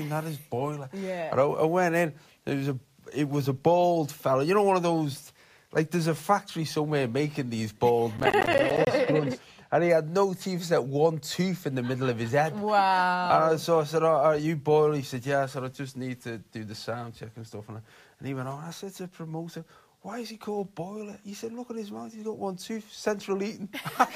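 From 7.90 s to 9.90 s the sound turns dull and muffled because de-emphasis was applied wrongly: a treble cut meant to reverse pre-emphasis was applied to audio that had none, or was applied twice. The response tilts down gently, ending about 11 dB lower at 10 kHz than at 1 kHz. It is a smooth slope across the upper range, not the abrupt ceiling of a low-pass filter or band-limiting, so high detail is softened rather than cut away.

Inside that stretch, from 8.18 s to 8.87 s, processor overload crackle rides on top. The processor repeatedly failed to finish its audio buffers in time, and each miss left a short hole of silence with hard edges. The dropouts fit buffers of around 10 ms. The result is a gritty, tearing burst that stops when the load eases. Clipping tracks loud peaks, and vinyl ticks are random, but these gaps come in a dense run.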